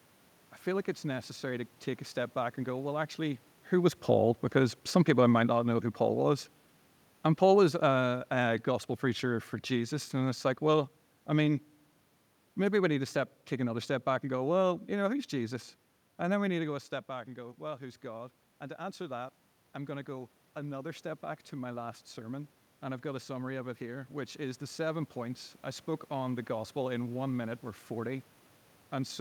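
Just after 3.5 s the talker moves at the mic, and from 3.75 to 5.87 s the automatic gain falls in response, pulling the level down by about 3 dB. You hear the speech ease back over those two seconds, with the room noise sinking right along with it.

Around 16.5 s the talker moves away and the input drops by about 11 dB. From 17.09 to 26.79 s the automatic gain rises slowly, adding about 9 dB. The speech and room noise swell together across nearly ten seconds, a clear sign of gain riding rather than the talker coming back.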